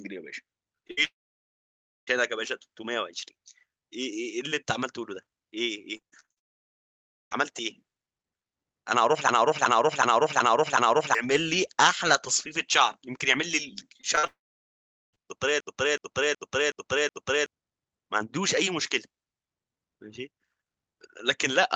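At 0.87 to 0.91 s comes a short concealed packet loss. About 20 ms of audio never reached the decoder in time. The receiver patched the hole by carrying the last sound forward, then blended back into the real audio. It is heard as a brief smear in the speech. The patch runs on for about 16 ms before real audio returns.

Straight after, from 0.91 to 0.99 s, there is a burst of packet loss. About 60 ms went missing in a row. The receiver extended the last sound and turned it down across the gap. The result is a short held buzz or fading hiss. Speech then resumes slightly further on, with that piece gone.

From 1.05 to 2.09 s, a long network dropout follows, likely caused by the connection stalling. Over a second of audio is lost. The concealed tail fades quickly. Then about 0.95 s of silence remains before the speech comes back, skipping what was lost.

Repeated packet loss with a robotic sound runs from 5.97 to 7.35 s. 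There are eight separate gaps, the longest 38 ms. About 13 percent of that span is patched. Each hole is filled by continuing the last sound, and the next soon follows. The speech turns choppy. Inside this stretch, from 6.38 to 7.33 s, a second long network dropout leaves about 0.93 s of silence.

From 9.29 to 11.15 s there is a system hang loop. The computer or driver froze while the sound hardware kept cycling one buffer. A 371.52 ms piece repeats exactly five times, at 2.69 Hz. The length fits a 16384-sample buffer. It sounds like a slow, mechanical stutter. Around two seconds of real speech are lost.

Repeated packet loss returns from 13.97 to 15.18 s. This time there are six gaps, the longest 40 ms, covering about 9 percent of the span. It brings the same choppy, robotic texture. A third long network dropout sits inside it, from 14.27 to 15.15 s. It leaves about 0.78 s of silence.

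A second system hang loop runs from 15.60 to 17.46 s. Again a 371.52 ms piece loops five times at 2.69 Hz, with about two seconds of speech lost. Throughout, the call path's coding noise and top end near 8 kHz point to Opus at around 32 kbps.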